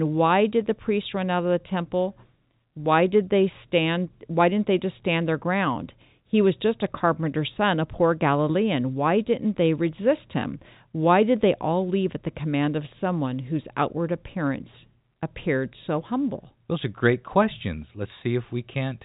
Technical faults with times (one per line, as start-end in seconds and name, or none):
none